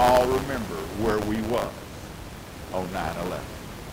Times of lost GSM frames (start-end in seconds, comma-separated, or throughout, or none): none